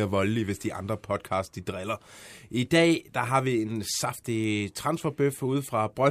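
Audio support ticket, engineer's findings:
Nothing to flag on this speech clip; no audible faults anywhere, so there's no component or mechanism to chase.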